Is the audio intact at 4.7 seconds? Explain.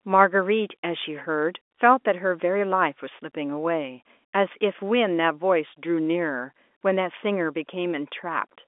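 Yes, the audio is intact at 4.7 seconds, with only the narrow band of the G.711 telephone coding, which lets nothing through above about 3.7 kHz.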